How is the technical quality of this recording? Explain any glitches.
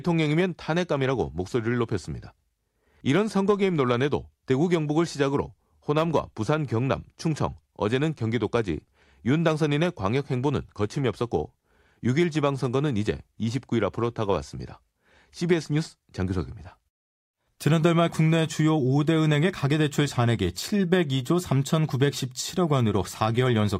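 The speech signal arrives intact, with no glitches to explain anywhere in the recording.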